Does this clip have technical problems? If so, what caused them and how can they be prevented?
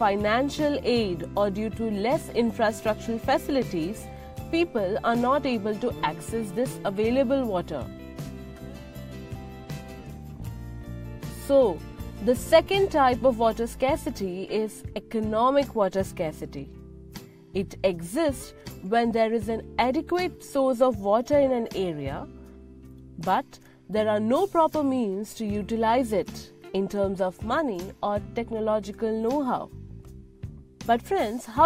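No, I hear no technical problems in this clip.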